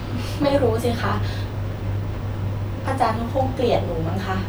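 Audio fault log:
No faults found in the speech on this pass.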